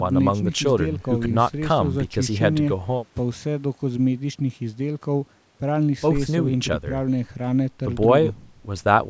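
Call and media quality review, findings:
No faults found: the speech signal is intact, shaped only by the normal call microphone processing, which trims the lowest bass and limits content to about 8 kHz.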